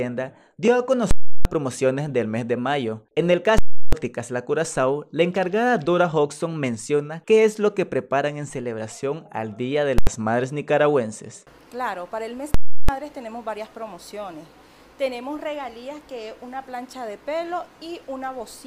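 Invalid numbers at full scale: a calculation produced invalid values that pinned output at an extreme value for 341 ms blocks at 1.11–1.45, 3.58–3.93 and 12.54–12.89 s, and an 85 ms block at 9.98–10.07 s, the longer blocks heard as loud pops with nothing between and the short one as a single bang.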